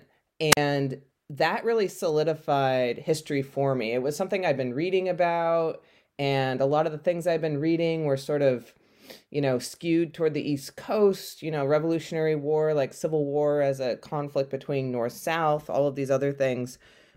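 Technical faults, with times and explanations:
0.50–0.57 s, wireless microphone squelch dropout: the radio link fades, hiss swells briefly, then the receiver's squelch mutes the output for about 40 ms before the speech returns. On a waveform this is a flat near-zero gap; a spectrogram shows broadband noise, then a blank vertical band.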